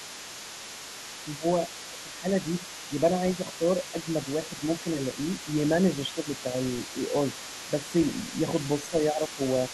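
A speech recording where an echo canceller likely left residual loudspeaker signal in the microphone, so the other side's voice leaks through for the whole clip, faint at roughly 15 dB below the talker. The same canceller likely mishandled double talk, causing speech suppressed in double talk: the talker dips by about 5 dB in brief stretches during 1.25–2.9 s, 3.59–4.85 s, 6.14–6.95 s and 7.67–8.33 s, and by about 10 dB during 8.9–9.4 s.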